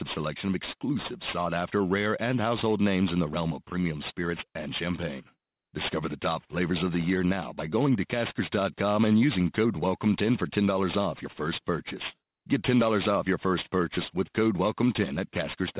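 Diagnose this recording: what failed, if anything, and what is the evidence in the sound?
Aliasing, introduced at a sample-format conversion stage, runs through the whole clip. Sibilants sound gritty and metallic. A spectrogram shows energy packed hard against a 4 kHz ceiling, with mirrored content folded down roughly 15 dB below the speech. This fits downsampling to 8 kHz without an anti-alias filter.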